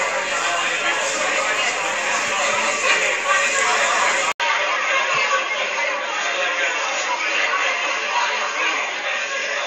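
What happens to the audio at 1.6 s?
Nothing goes wrong at 1.6 s; the audio carries straight through that moment without a dropout, click, glitch or other technical fault.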